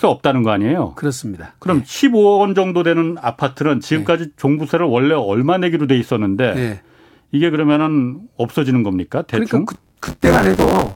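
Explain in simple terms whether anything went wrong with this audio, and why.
Near the end, from 9.74 s to 10.96 s, the speech gains a robotic buzz at 93.8 Hz. This is buffer tearing. Playback fell out of step, so about a third of each chunk repeats sound from roughly 20 ms earlier.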